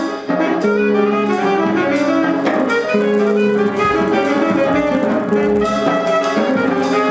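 From 2.29 s to the end, the resampler restarts on every block: each 10 ms block is converted from 24 kHz to 16 kHz in isolation, leaving a small error at each edge. The result is a 100 Hz buzz riding on the signal.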